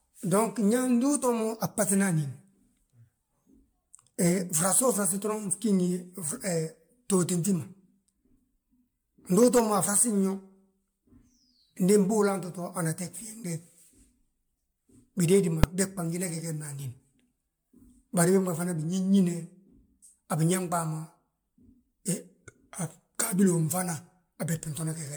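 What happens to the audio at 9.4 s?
At 9.4 s the speech carries generation loss, as it does across the whole clip. The sound is swirly and hollow. Consonant attacks are smeared, and nothing remains above about 19.9 kHz. The likely cause is repeated lossy re-encoding, around ten MP3 passes at a rate that fits roughly 130 kbit/s. Each pass quantises on a shifted frame grid. Noise and spectral holes pile up, so it sounds worse than that bitrate alone would.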